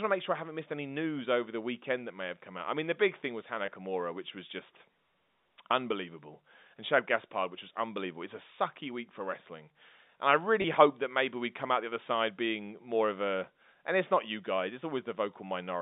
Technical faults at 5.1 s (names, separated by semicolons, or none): none